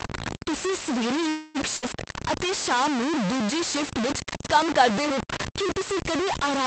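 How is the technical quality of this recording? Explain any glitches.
The technical quality is poor: the speech is coarse and grainy from start to finish, and two short glitches interrupt it near the start, a stall followed by a brief dropout.

Low bit depth without dither runs through the whole clip. The grain follows the speech instead of sitting beneath it as a steady hiss. Quieter syllables turn gritty and the faintest parts sputter. The distortion is roughly as loud as the speech itself, which points to about 4 bits. The likely cause is truncation to that depth without dither.

A call audio freeze runs from 1.29 to 1.57 s, right after "ਤੁਸੀਂ ਸਵੇਰੇ". For about 250 ms the last sound is stretched into a fading buzz before the speech resumes where it left off, so nothing is lost and the rest arrives late. Packets were likely held up until the jitter buffer ran dry.

A burst of packet loss follows between 1.77 and 1.84 s, after "ਤੁਸੀਂ ਸਵੇਰੇ ਇੱਕ" and before "ਅਤੇ ਸ਼ਾਮ ਨੂੰ ਦੂਜੀ". 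About 60 ms of speech never arrived. The receiver filled roughly 58 ms with a fading continuation of the preceding sound and then jumped ahead, so that stretch is missing. This all came over an Opus call path, whose band stops near 8 kHz.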